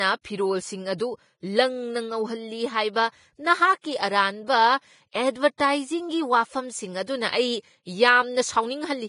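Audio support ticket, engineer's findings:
Hissy, grainy treble and roughened tone throughout the speech; nothing above 10.6 kHz. Likely heavy Vorbis compression, damage consistent with a rate near 28 kbps: residue quantised into noise. Unlike broadband hiss, the grain follows the signal and stops at a hard cut-off.

Pre-echo at 3.81–3.84 s and 5.58–5.60 s: a brief hiss of about 26 ms and 20 ms ahead of sharp attacks, onsets softened. Same codec's block-wide quantisation noise filling the quiet before the transient. Unlike a click, it is a smeared wash leading in, not an impulse.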